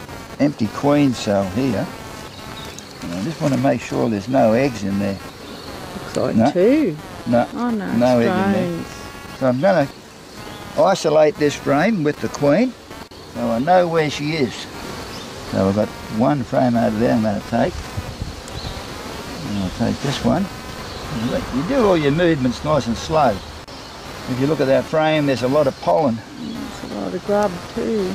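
Computer activity noise runs through the whole clip: a buzzing, scratchy pulse at roughly 200 per second, sitting about 20 dB below the signal. Processor, graphics or mouse load disturbs the shared ground, so the buzz follows machine activity rather than the sound.

At 5.2 s, 18.08 s, 21.04 s and 27.24 s the audio jumps forward, skipping around 20 ms each time except at 18.08 s, where about 40 ms goes missing. These are likely dropped buffers (overrun), where samples were overwritten before being read and the remaining edges were spliced together.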